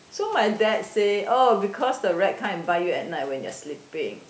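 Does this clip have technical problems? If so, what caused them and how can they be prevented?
No, there are no technical problems in this speech clip, so there is nothing to prevent. It has passed through call microphone processing, which trims the lowest bass and leaves nothing above 8 kHz, as is normal for that path.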